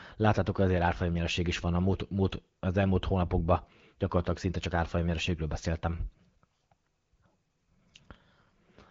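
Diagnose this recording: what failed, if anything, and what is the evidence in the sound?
Nothing failed: the speech passes through an AMR wideband (HD Voice) path whose light coding texture fits a rate of about 15.85 kbit/s, with the spectrum ending by about 7.5 kHz as that codec's bandwidth dictates.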